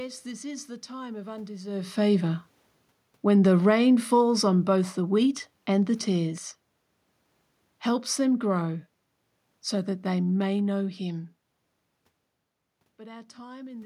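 From 3.51 to 6.41 s, automatic gain falling: the gain control judged the input too loud or its background noise too strong and eased its gain down by about 5 dB. The room noise sinks along with the speech, which marks it as gain riding rather than the talker moving, as near 1.5 and 11 s.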